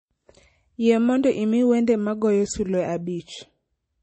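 Throughout, the speech sounds dull and watery, with nothing above about 8.3 kHz, swirling on s sounds and smeared attacks. This is likely MP3 compression at a starved bitrate, the damage fitting roughly 32 kbps: the encoder cut the treble and dropped weak frequency lines that flicker between frames.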